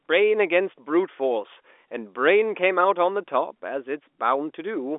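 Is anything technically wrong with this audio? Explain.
No, there are no faults.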